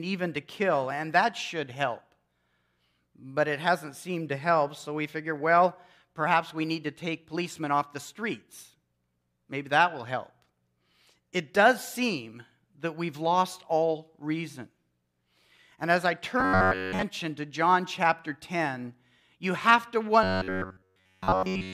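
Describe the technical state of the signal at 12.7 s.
At 12.7 s the signal is intact, with no technical fault present at that moment.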